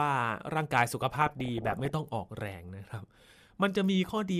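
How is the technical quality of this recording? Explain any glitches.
There's one glitch worth flagging. From 1.16 to 1.90 s the speech gets hit by DAB burbling. Weak reception lets bit errors, around one percent, slip past error correction into the MP2 data, so wrong samples put short blips of noise into single sub-bands. You hear burbling blips of noise over the voice.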